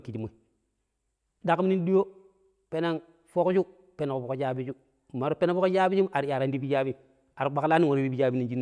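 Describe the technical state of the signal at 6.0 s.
At 6.0 s the speech signal is intact, with no technical fault present at that moment.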